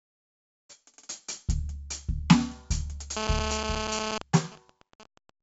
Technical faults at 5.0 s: 4-bit ADPCM compression; GSM signalling bursts

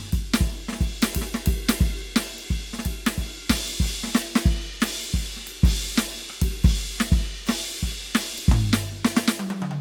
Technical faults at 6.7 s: none

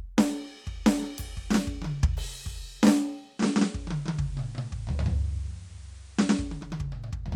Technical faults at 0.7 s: none

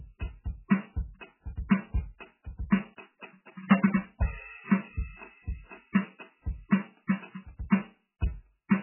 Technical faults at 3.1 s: MP3 compression

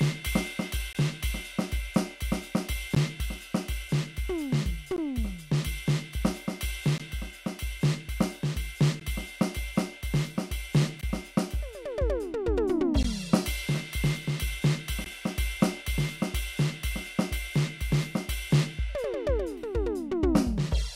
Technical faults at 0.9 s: gap at a join of encoded pieces

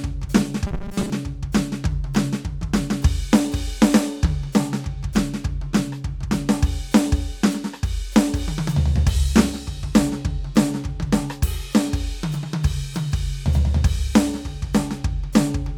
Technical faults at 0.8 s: robotic sound from repeated short buffers

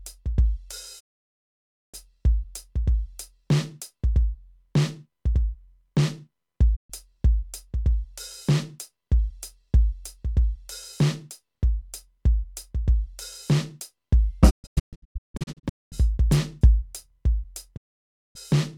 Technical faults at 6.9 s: digital broadcast dropout

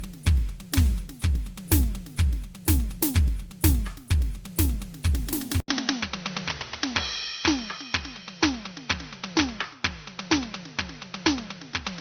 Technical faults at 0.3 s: generation loss

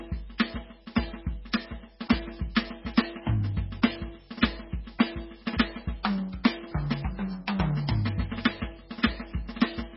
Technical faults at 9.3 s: MP3 compression

